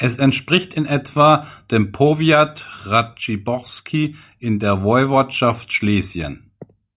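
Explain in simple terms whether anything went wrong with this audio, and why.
Nothing went wrong here: the speech runs without any dropout, glitch or interruption at any point.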